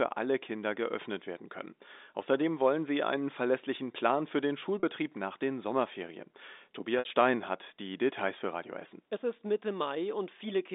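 At 4.80 s and again from 6.99 to 7.05 s there's packet loss with pitch repetition: the receiver loops the last pitch period to cover the gap. The first, about 30 ms, is a brief buzzy hold. The second, about 60 ms, fits two lost packets and fades toward silence before the telephone-band audio cross-fades back.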